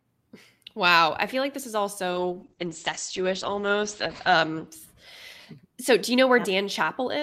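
From 2.12 s to 4.73 s there is a call bitrate drop: the bandwidth estimate collapsed and the encoder was pushed onto a much smaller bit budget, which fits a fall from around 48 kbps to about 10 kbps, held at its lowest for roughly 2.2 s. Coarser coding makes the speech rough and watery, and the audio band narrows from 20 kHz to 8 kHz, so it also sounds muffled until the bitrate recovers.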